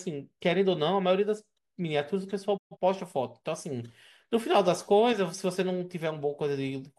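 Speech that drops out abruptly at 2.56 s: the sound fades to silence within about 20 ms, stays muted, and comes back at 2.77 s with whatever was said in between missing, not delayed. This is a digital broadcast dropout. The receiver stopped getting decodable frames, either from signal loss or failed checksums, so it muted the output until valid data returned. The roughly 128 ms of lost programme fits a handful of consecutive bad frames.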